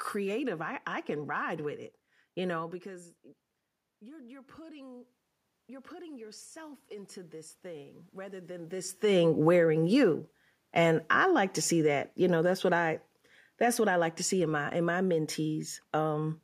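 From 3.99 to 5.15 s, and again from 5.67 to 8.97 s just before "wearing you", the voice and the room noise behind it swell up together. This is automatic gain rising. After the talker moved back around 2.5 s, the input fell by about 19 dB, and the gain control responded by gradually turning itself up, by about 4 dB in the first rise and about 7 dB in the second, recovering only part of the lost level.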